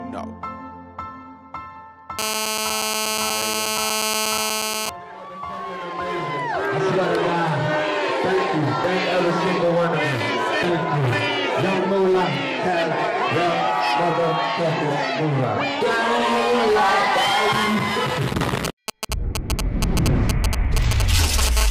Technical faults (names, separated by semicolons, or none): GSM phone buzz; GSM signalling bursts